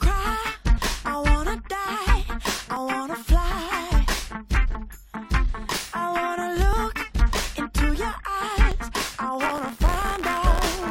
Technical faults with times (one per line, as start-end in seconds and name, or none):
0.78 overlap between stream segments
2.76 overlap between stream segments
4.75 overlap between stream segments
6.73 overlap between stream segments
8.72 overlap between stream segments
9.42-10.91 buffer tearing